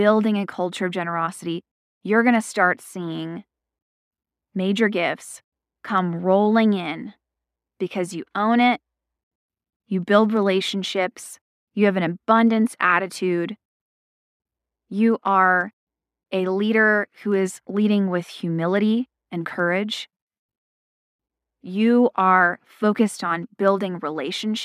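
Speech recording with no audible technical faults.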